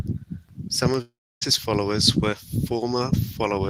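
A long network dropout is the likely cause of the break from 1.01 to 1.43 s in this speech. Audio stopped arriving for about 0.4 s, and the receiver papered over the hole by stretching out the last sound it had. That stretched sound decays into a fading buzz or hiss, leaving roughly 0.29 s of near silence. The speech then resumes at "followers were", with the lost 0.4 s simply missing.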